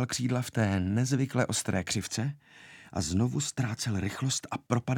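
Nothing here trips the ear at all; the sound just rolls along from its first moment to its last without anything going wrong.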